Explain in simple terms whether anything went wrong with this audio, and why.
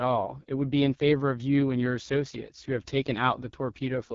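The speech passed through an AMR wideband (HD Voice) codec at its lowest quality setting for the whole clip, so the voice sounds rough and raspy, with nothing above about 7 kHz.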